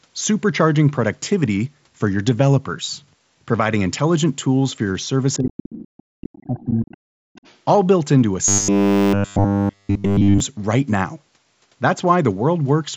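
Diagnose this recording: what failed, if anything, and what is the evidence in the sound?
Call processing, most likely the echo canceller, let the other side's voice leak through in faint scraps at 5.33–5.37, 5.72–6.03, 6.33–6.38, 6.57–6.65, 6.89–6.97 and 7.36–7.57 s, roughly 20 to 35 dB below the talker. Unlike a crosstalk hum or bleed, it is a second voice, arriving intermittently.

Speech suppressed in double talk, again in the echo canceller, shows at 5.39–5.79 and 6.05–7.32 s. The talker's level collapses by around 40 dB while the leaked voice overlaps, likely because the canceller ducked both sides. This differs from a dropout: it tracks the overlap rather than random gaps.

Robotic sound from repeated short buffers runs from 8.48 to 10.40 s, with the whole stretch replaced by repeats. It is a rigid, metallic 100 Hz buzz still loosely following the speech, which fits a 10 ms buffer being looped, likely a driver or buffer stage starved of new audio. 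A codec artefact would not impose one fixed pitch.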